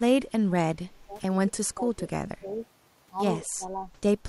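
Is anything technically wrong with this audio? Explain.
Yes. Speech suppressed in double talk occurs four times: 0.66–1.1 s, 1.47–1.78 s, 2.39–2.45 s and 3.46–3.64 s. The voice dips by roughly 25 dB in the first two and 15 dB in the last two, likely an echo canceller muting through overlapping far-end talk. Waveform and spectrogram show matching gaps.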